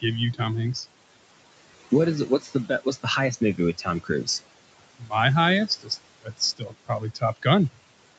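Noise suppressor artifacts run through the whole recording. The suppressor treats the room noise, which sits about 15 dB under the speech, as steady background and pulls it down by about 21 dB frame by frame. The noise floor therefore sinks in the gaps and climbs back under each phrase. On a spectrogram the background shows as a patchy, blotchy haze that switches on and off with the speech energy, all below the 8 kHz band edge of the call path.

The suppressor also cuts into the speech itself six times, mistaking quieter speech for noise. The first cut runs from 2.27 to 3.06 s, after "is it" and before "highest movie with". The next runs from 3.78 to 4.28 s, following "highest movie with". Four more follow at 4.98 to 5.14 s, 5.67 to 5.91 s, 6.21 to 6.41 s and 6.57 to 7.46 s. The drops reach about 15 to 22 dB and touch part of each span, from about 0.15 to 0.4 s. Soft consonants and word endings come out swallowed. 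On the waveform the envelope shows sudden dips, and on the spectrogram the weaker harmonics and fricative energy vanish in short gaps.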